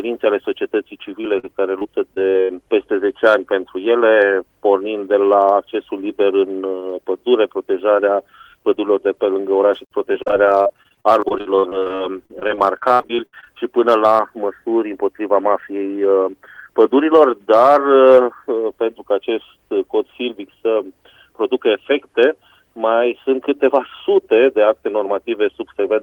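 From 1.21 to 2.51 s, and again more heavily from 10.13 to 13.48 s, the audio suffers repeated packet loss (robotic sound). Holes of up to about 67 ms keep appearing, each bridged by stretching the preceding sound, giving a choppy sound with pieces missing. Roughly a sixth of the first span and over a quarter of the second is filled in. A spectrogram shows smeared, frozen harmonic bands; the waveform shows repeated, copied-looking cycles.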